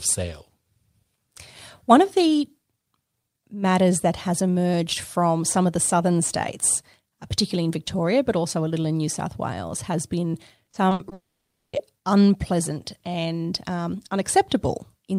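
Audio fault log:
10.65–11.13 s, repeated packet loss (robotic sound): Right after "has been", the speech breaks up into five short holes, the longest about 60 ms. Each hole is filled by stretching the last bit of sound, so about 140 ms of this half-second is patched rather than real, close to 29 percent of it. The rapid cycle of missing audio and smeared fill gives the choppy, robotic texture.
11.13–11.75 s, long network dropout: Straight after the choppy stretch, the sound stops for about 600 ms. The final fragment carries on briefly as a fading buzz or hiss before about 520 ms of silence. Speech returns at "unpleasant and um", but the audio from the gap is never heard. The likely cause is a network interruption in which nothing arrived, so the receiver stretched its last sound and then played silence until the stream resumed.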